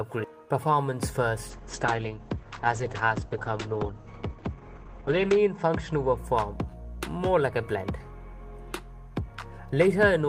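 From 1.5 s to 6.23 s, a call bitrate drop sets in. The high end narrows from 20 kHz to 8 kHz, and the sound turns muffled and rough, worst for about 3.9 s. That fits the encoder falling from 40 to 10 kbps.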